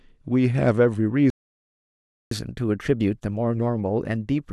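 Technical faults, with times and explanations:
1.30–2.31 s, playback stall: the speech stops abruptly mid-flow and silence holds for about 1.01 s before the sound resumes. The player likely ran out of buffered data or had its output thread blocked, so nothing reached the output until it recovered.
2.31–4.53 s, catch-up at higher speed: from the restart to the end, the speech runs 1.1 times faster and sits roughly one and a half semitones sharp. The player is resampling its backlog to regain some of the lost time, so speed and pitch rise together.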